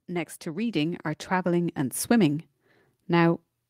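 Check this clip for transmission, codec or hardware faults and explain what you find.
There is one fault, a level problem rather than a codec or transmission error. Automatic gain rising, from 0.07 to 2.5 s: the automatic gain control judged the input too quiet and raised its gain gradually by about 8 dB, so the speech and any background swell upward together over those seconds.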